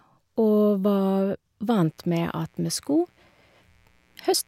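A speech clip with mains buzz entering at 1.83 s and running to the end: a steady, raspy buzz from 60 Hz switching spikes, well below the voice. On a spectrogram it shows as evenly spaced horizontal lines at 60 Hz multiples reaching several kHz.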